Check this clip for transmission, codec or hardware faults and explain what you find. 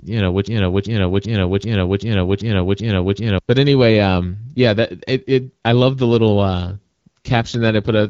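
Two faults are audible in this speech clip, heard over an AMR wideband (HD Voice) path.

From 0.47 to 3.39 s there is a broken-record loop: a 387 ms fragment repeats exactly, eight times back to back, likely from a stalled stream resending its last buffer. Unlike stutter or packet loss, nothing new appears, and the audio from that span is lost.

From 6.55 to 8.08 s an AMR rate drop makes the voice rougher and more synthetic, consistent with a fall from 12.65 to 8.85 kbit/s. Unlike a band switch, the bandwidth stays and there is no gap.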